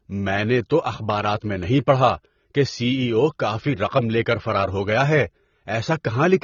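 From start to finish the speech sounds dull and smeared, with nothing above about 7 kHz and a watery, warbling texture on sustained sounds and sibilants. This is likely AAC compression, specifically AAC-LC at a low bitrate, which fits something near 24 kbps. Starved of bits, the encoder lowers its cut-off and quantises the remaining frequency lines coarsely against its hearing model, so detail vanishes and the damage is plainly audible.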